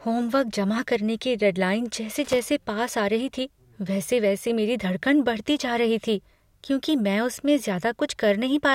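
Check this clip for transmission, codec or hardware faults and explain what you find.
One hardware fault is audible in this speech clip. Loose connector crackle runs from 2.25 to 2.39 s, between "करने की डेडलाइन जैसे" and "पास आ रही थी". A worn contact rapidly making and breaking chops the signal into an irregular scratchy burst about 0.14 s long. It shows on the waveform as jagged dropouts and spikes, and on the spectrogram as broadband vertical streaks.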